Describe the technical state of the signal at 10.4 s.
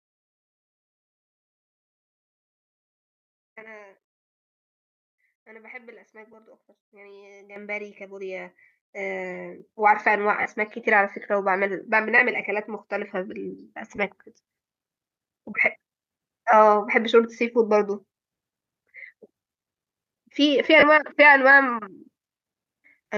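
At 10.41 to 10.46 s there are lost LE Audio frames: a 37.5 ms gap, which fits five 7.5 ms LC3 frames. The decoder conceals it by replaying the last spectrum with randomised signs, so the sound briefly becomes a noisy, smeared texture.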